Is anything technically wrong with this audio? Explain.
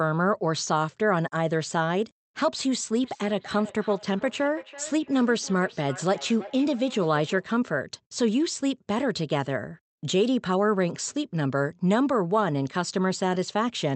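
Yes. From 3.04 to 7.49 s there is feedback echo between two devices. A second device replays the speech into a nearby microphone, so each phrase returns roughly every 0.3 s, about 17 dB down and thin and ringing. On a spectrogram this shows as faint, evenly spaced copies trailing each syllable.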